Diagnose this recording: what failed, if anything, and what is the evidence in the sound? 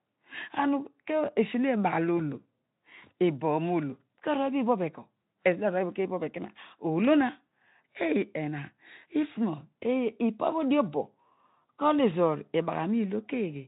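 At the network stage, VoIP packet loss concealed by the speech codec: from 2.17 to 2.21 s the decoder extrapolates a buzzy or noisy, fading stretch, which fits one lost 20 ms frame.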